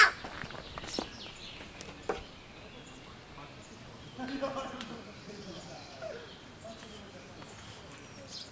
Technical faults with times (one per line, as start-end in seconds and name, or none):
none